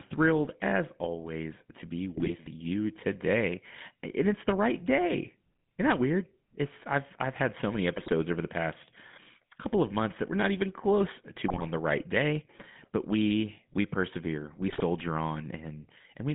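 GSM full-rate codec damage runs through the whole speech clip. The voice has the gravelly, buzzy roughness typical of a coder that models the vocal tract and drives it with a sparse pulse train instead of the real excitation, which fits the 13 kbps full-rate codec. Detail is plainly lost, and the band is cut to roughly 150 Hz to 3.6 kHz, so the sound is thin and dull at the top.

GSM bit errors break in four times: 2.14 to 2.34 s, between "as always to be" and "you today"; 7.96 to 8.13 s; 11.48 to 11.66 s, between "we're not even close" and "the right day but"; and 14.68 to 14.81 s, just after "we we persevere we". In each burst, corrupted filter, pitch and gain values reach the decoder across several frames in a row. The spectrum warps and the level jumps, so the voice briefly squawks, pops and gargles.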